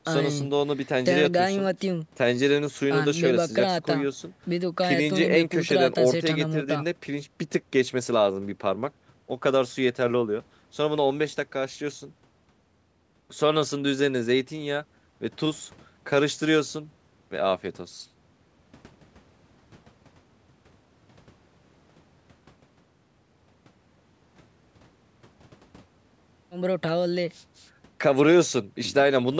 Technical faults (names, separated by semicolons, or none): none